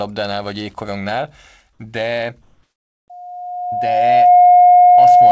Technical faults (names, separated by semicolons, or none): loudspeaker feedback squeal